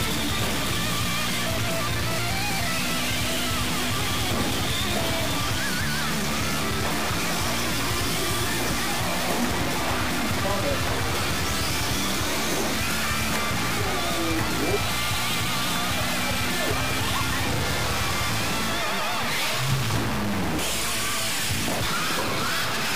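A stuck bit runs through the whole clip, likely one converter or data-line bit held fixed. About half the samples are shifted by its weight, a step of about -25 dBFS, producing harsh, buzzy distortion, and quiet stretches fill with fairly loud noise.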